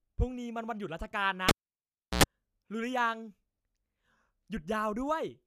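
At 1.49 s the cable is pulled and plugged in: a pop, 0.7 s of near silence, an 87 ms burst of 60 Hz mains buzz as only the tip touches, then a second pop at 2.23 s as the speech returns. The waveform shows spikes around a flat gap, and the spectrogram shows broadband vertical lines with stacked 60 Hz harmonics.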